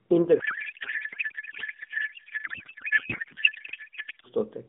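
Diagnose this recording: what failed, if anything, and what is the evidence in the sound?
The codec stage failed with a codec payload misread. From 0.40 s to 4.26 s the speech gives way to garbled noise and warble that barely tracks it, then normal narrowband speech returns, band-limited to about 150 Hz to 3.6 kHz and consistent with AMR at roughly 12.2 kbps. The receiver appears to be unpacking octet-aligned AMR frames as bandwidth-efficient ones, so every field lands in the wrong place. Packet loss would cause brief dropouts or concealment smears, whereas this is sustained nonsense from valid-looking frames.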